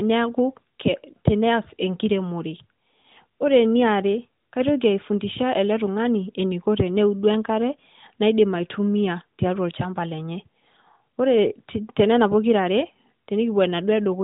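Nothing stood out on listening to this speech recording.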